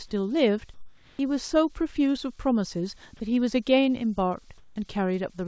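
Comfort noise in place of the background at 0.74–1.19 s and 4.58–4.76 s: pauses turn into steady, featureless hiss about 4–5 dB quieter, likely from discontinuous transmission in the call path.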